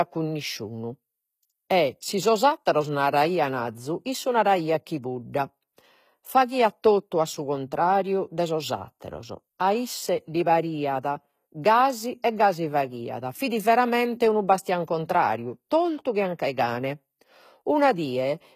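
Throughout, the speech carries plainly audible HE-AAC compression: treble likely rebuilt from copied lower bands, s sounds gritty and metallic, and nothing above about 14.9 kHz.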